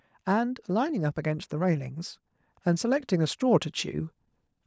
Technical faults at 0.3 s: automatic gain rising

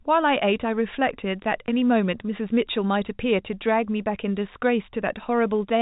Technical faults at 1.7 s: packet loss with last packet repeated

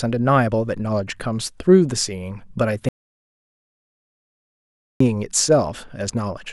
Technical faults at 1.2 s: none

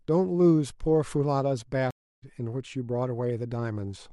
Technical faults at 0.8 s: none

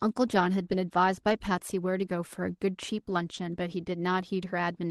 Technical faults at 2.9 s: none

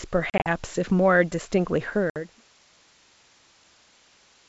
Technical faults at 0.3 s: packet loss on an ADPCM call

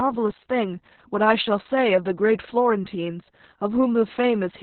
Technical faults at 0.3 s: Opus voice compression

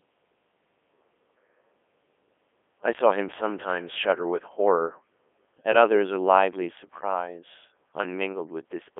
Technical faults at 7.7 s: Codec 2 vocoder

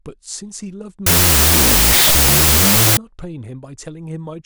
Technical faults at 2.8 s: wrong sample width

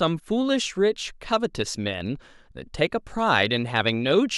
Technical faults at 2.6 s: none

